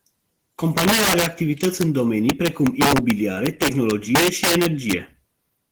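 Throughout the speech, the loudest peaks burst into harsh, violent cracks, far sharper and more splintered than ordinary clipping. This is integer overflow. The signal was driven about 7 dB past the top of the integer range, and instead of being held at the limit, each peak wrapped around to the opposite extreme. Only a small share of samples, around one or two percent, crossed that line, but each crossing swings across the full range and produces a crack.

Underneath those cracks, also for the whole clip, the speech has a muffled, slightly hoarse and robotic quality. This is Opus voice compression at a low bitrate. The sound fits roughly 16 kbps in hybrid mode, with 20 ms frames. The linear-prediction layer carries the lower band, and a transform layer covers the content above 8 kHz. The band reaches about 20.2 kHz, but the excitation is coded coarsely enough that the damage is plainly audible.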